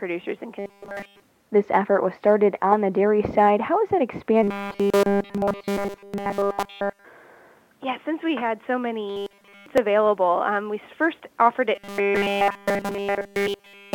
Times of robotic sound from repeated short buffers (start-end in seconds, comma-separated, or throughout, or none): 0.59-1.21, 4.43-7.05, 9.08-9.66, 11.75-13.95